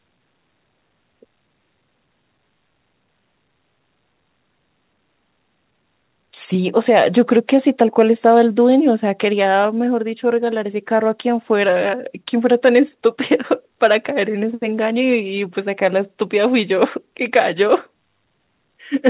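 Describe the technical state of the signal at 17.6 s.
At 17.6 s the speech is intact, with no dropout, distortion or other fault, only the ordinary band limit of a call path, where nothing reaches above 4 kHz, as you would expect from a narrowband telephone codec such as G.711 A-law.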